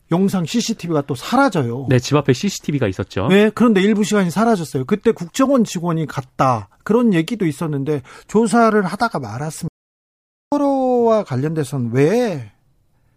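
At 9.68 s the speech cuts out dead and stays gone until 10.52 s, an audio dropout to silence lasting about 0.84 s. There's no room tone in the gap at all, just silence, so the input likely dropped while the recorder kept writing.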